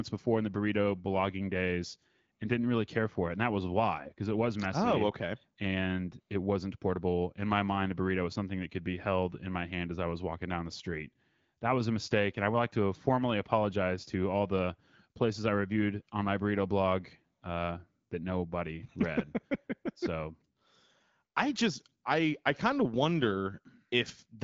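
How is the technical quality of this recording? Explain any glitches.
Nothing stood out on listening: the speech, carried over an AMR wideband (HD Voice) link at 12.65 kbit/s, has no glitch worth flagging.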